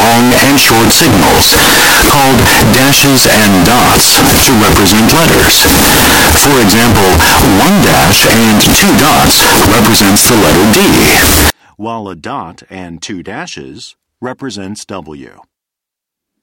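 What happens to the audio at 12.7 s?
Nothing goes wrong at 12.7 s: the speech continues cleanly through that moment, with no dropout, click or other fault.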